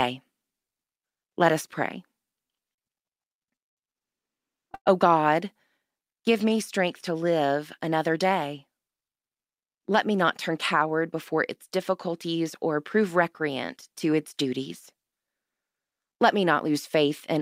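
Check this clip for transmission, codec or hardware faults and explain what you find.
Three timing faults are audible in this speech clip, all from the receiver's jitter buffer.

Repeated stalls (stutter) run from 2.47 to 4.89 s, just after "let us pray". Packets arrived late or too slowly, and the buffer ran dry seven times. Each time the receiver stretched the last sound to cover the wait. The patches total 280 ms, and the longest lasts 113 ms. About 12% of the span is concealed. Nothing is lost. The speech drags and stutters instead.

A jitter buffer slow-down follows from 6.07 to 6.58 s, ending just before "strength to live another". The buffer was low and needed a reserve. So the receiver repeated single pitch periods or bits of pause. This adds 56 ms. The speech plays at 90% speed with unchanged pitch. Sounds are drawn out.

A jitter buffer speed-up spans 8.67 to 10.8 s, between "to live another day" and "before its difficulties or". 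Here the buffer held too much audio. The receiver cut short pieces of one or a few pitch periods, again and again. Roughly 150 ms is removed. The speech runs at 108% speed, with pitch unchanged. It sounds hurried.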